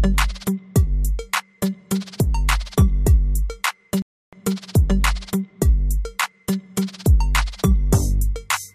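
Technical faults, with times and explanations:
4.02–4.33 s, Bluetooth stall: the wireless link most likely lost packets to interference, so the receiving end used up its buffered audio and had nothing to play while it waited for the missing data to be resent. The sound drops to complete silence for about 0.31 s and then resumes. Because the output simply stops, there is no fade or crackle around the gap, only an abrupt hole in the sound.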